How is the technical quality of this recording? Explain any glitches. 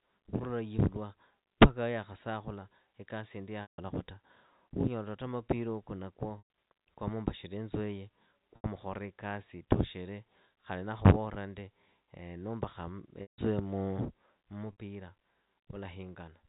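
The speech is telephone-band throughout, with nothing above 4 kHz, and it is interrupted by five dropouts.

Packet loss with pitch repetition occurs at 3.62 s (160 ms lost), 6.38 s (120 ms), 8.56 s (80 ms), 13.22 s (160 ms) and 14.72 s (60 ms). When packets went missing, the receiver repeated the last pitch period and faded it out over about 50 ms. Each loss therefore sounds like a held, buzzy tone that dies away. Where the gap runs past the fade, it goes silent until the speech cross-fades back in.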